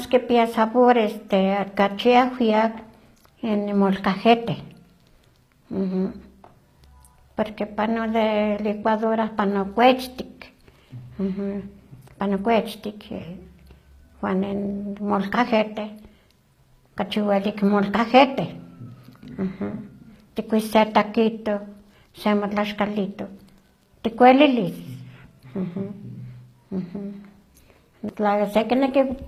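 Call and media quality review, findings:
Speech, throughout: treble bright but synthetic, s sounds gritty and lispy, plainly audible. Likely HE-AAC compression, fits roughly 24 kbps. Upper band rebuilt from copied lower bands under coarse envelope; harmonics misalign across crossover.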